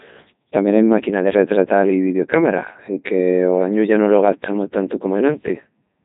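Speech runs through the Codec 2 vocoder for the whole clip, and the damage is heavy: the voice sounds robotic and buzzy because the decoder rebuilds it from sine waves driven by pitch, voicing and a spectral envelope instead of keeping the original waveform. The sound fits Codec 2's highest mode, around 3.2 kbit/s. On a spectrogram there is nothing above 3.8 kHz and the harmonics look unnaturally regular. The waveform no longer resembles natural speech.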